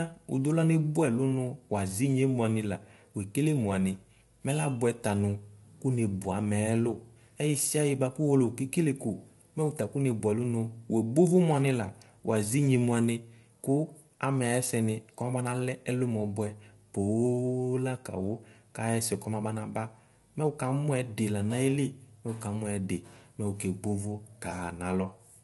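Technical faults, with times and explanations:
Throughout, low-delay AAC compression. The speech sounds rough and grainy, with plainly audible codec damage. Noise fills the gaps between the pitch harmonics, so the tone loses its clean structure. Nothing is present above 11.6 kHz. The likely cause is AAC-ELD, the low-delay codec of video calls, at a rate that fits about 32 kbps. Its very short frames separate harmonics poorly, and at that rate too few bits remain to code them cleanly.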